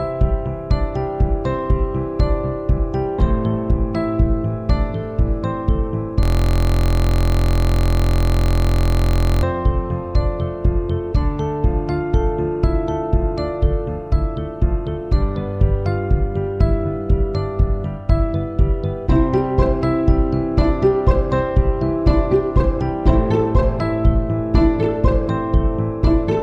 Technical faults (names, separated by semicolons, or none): system hang loop